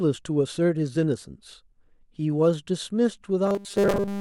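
From 3.46 s to 4.21 s the speech collapses into a rigid, metallic buzz pitched at 200 Hz. It still roughly tracks the syllables. This is robotic sound from repeated short buffers. The likely cause is fresh audio arriving too slowly, so the playback keeps looping a 5 ms slice, which fits a buffer of about that size. Roughly seven tenths of the time is filled with these repeats, while the real audio in between is skipped.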